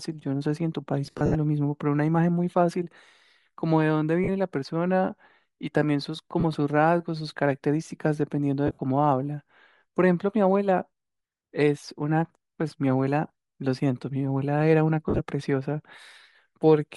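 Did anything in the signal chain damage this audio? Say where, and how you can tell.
Yes. Bluetooth LC3 compression affects the whole speech clip at the codec stage. The voice has a plainly audible breathy, grainy edge where the upper spectrum has been replaced with noise fill. This is likely LC3 working with 10 ms frames at around 48 kbps.

Lost LE Audio frames occur on the wireless link at 1.07–1.36 s, 4.24–4.29 s, 6.40–6.44 s, 8.67–8.81 s, 13.28–13.30 s and 15.09–15.20 s. The decoder repeated the last spectrum with random signs, fading it after the first few frames. The worst is near 1.1 s, with 170 ms lost across 280 ms.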